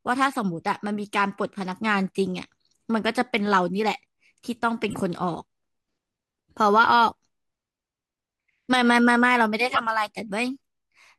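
Corrupt frame decoded at 0.32–0.36 s, 4.90–4.96 s and 9.69–9.79 s: the decoder played damaged compressed frames, misplacing energy in frequency. The result is a faint blip from a single frame, then two much louder multi-frame bursts.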